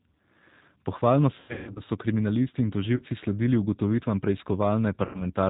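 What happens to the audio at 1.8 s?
At 1.8 s the clip is leaving a burst of VoIP packet loss concealed by the speech codec, spanning 1.40 to 1.82 s, just before "so kriminalisti in". The decoder stretches its last pitch and filter into a fading buzzy tone or coloured noise across roughly 270 ms of gaps, the longest 150 ms. Underneath, the 8 kbit/s G.729 codec band-limits everything to 4 kHz and adds a rough, synthetic texture.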